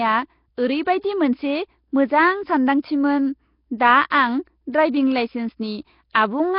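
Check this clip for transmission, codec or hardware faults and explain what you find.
One codec fault runs through the speech. For the whole clip there is heavy damage, likely from Nellymoser compression: blocks of 256 samples coded at a fixed two bits each, which fits a low rate around 22 kbps. Weak bands are replaced with noise, leaving a rough, hissy halo and a smeared, underwater tone, with nothing above 5.3 kHz. A plain band limit would sound dull but clean, not noise-filled.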